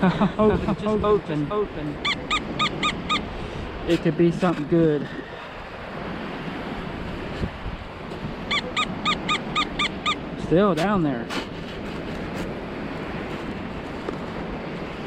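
From the start of the clip until 2.06 s, a doubled audio track is heard: a second full-band copy of the sound trails about half a second behind, a few decibels quieter, with no decay or room colour, then stops abruptly. This likely comes from a slower second capture path.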